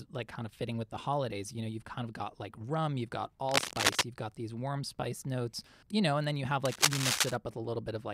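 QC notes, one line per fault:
3.45–4.04 s, cable scratch noise: after "like rum you've got", dense, uneven crackling rustle sits over the speech, roughly 5 dB louder than it. This is likely a worn cable or connector being moved, with its contact resistance changing rapidly.
6.65–7.36 s, cable scratch noise: after "and then you have", the same scratchy, irregular bursts return at a similar level for about 0.7 s, likely from a flickering contact.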